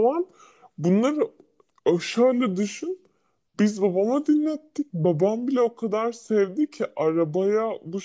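From start to end, the speech is played back too slowly, a wrong sample rate fault. It runs at about 0.73 times normal speed and about 5.5 semitones low, which fits 22 kHz audio played at 16 kHz. Unlike a pitch shift or time stretch, tempo and pitch drop together.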